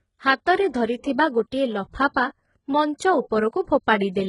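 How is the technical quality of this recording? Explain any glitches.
Pretty rough, honestly. The speech carries heavy HE-AAC compression damage throughout: nothing above 11 kHz, and the top end sounds like copied-up lower bands rather than real treble. It's likely spectral band replication at a bitrate around 12 kbps, so sibilants come out gritty and metallic.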